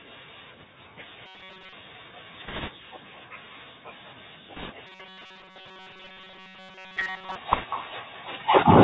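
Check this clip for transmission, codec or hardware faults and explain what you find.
Four faults are audible in this speech clip: an echo with no canceller and Bluetooth CVSD codec damage run throughout, robotic sound from repeated short buffers appears twice, and bit errors on a Bluetooth voice link appear three times.

Echo with no canceller runs through the whole clip. The far end is playing the call on a loudspeaker, its microphone picks that up, and nothing subtracts it, so the speech returns after the network round trip. Every phrase is followed, roughly a fifth of a second later, by a copy about 14 dB down, thinner than the original.

The Bluetooth CVSD headset codec is also present for the full duration, and its damage is plainly audible. The band stops at 4 kHz, which fits the narrowband 64 kbps CVSD mode. Because the codec tracks the waveform with one up-or-down bit per sample and an adapting step, loud high-frequency content overruns it, so sibilants turn scratchy and a granular hiss sits under the speech.

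Robotic sound from repeated short buffers occurs from 1.26 to 1.73 s and again from 4.87 to 7.36 s. In both stretches a rigid, metallic buzz at 188 Hz takes hold, while the speech contour remains loosely traceable underneath. The likely cause is audio arriving too seldom, with the receiver filling the gaps by looping the most recent fragment. Most of the real audio is skipped, and a loop of roughly 5.3 ms sets the buzz frequency.

Bit errors on a Bluetooth voice link occur at 2.48–2.71 s, 4.56–4.72 s and 7.52–7.65 s. Each burst adds a rushing, crackly noise over the speech with no sharp clicks. That fits flipped bits on the CVSD stream, which carries an error rate of a couple of percent. Every bit has equally small weight and the decoder's adaptation lets errors decay, so the damage is spread into noise rather than producing loud transients.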